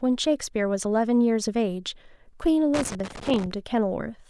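At 2.74 s a loose connector crackle breaks into the speech and lasts until 3.46 s. A worn or dirty contact is making and breaking intermittently, chopping the signal on and off. The result is an irregular, scratchy burst of crackle lasting about 0.7 s.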